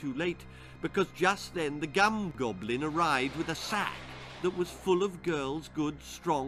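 No technical faults are audible anywhere in this audio.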